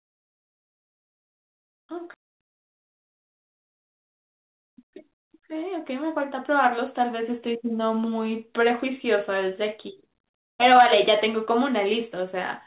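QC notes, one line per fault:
2.14–2.16 s, skip ahead: about 0.4 s of audio was dropped, so playback jumps forward and joins both sides directly with no gap.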